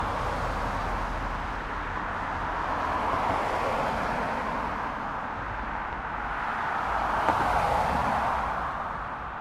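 No technical faults can be heard in this recording.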